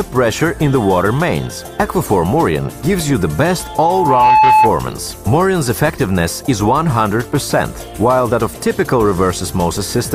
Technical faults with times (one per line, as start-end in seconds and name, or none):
3.58-4.78 loudspeaker feedback squeal